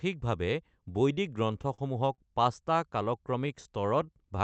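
Repeated stalls (stutter) occur between 1.53 and 2.2 s. Packets reached the receiver late or too slowly, so its jitter buffer ran dry four times in that stretch. Each time, the receiver held and continued the last sound until fresh audio arrived. The stalls fill about 98 ms in total, which is about 15% of the span, the longest 39 ms. Nothing is lost, but the sound catches and drags in short hitches.

A jitter buffer slow-down follows from 3.31 to 4.36 s. With its reserve running low or its target delay just raised, the receiver built up a reserve by repeating single pitch periods and small pieces of pauses many times over. This adds 129 ms, so the passage plays at about 88% speed without any change in pitch. Sounds are drawn out and slightly stretched. The call path, which points to Opus at around 40 kbps, cuts the audio off above 8 kHz throughout.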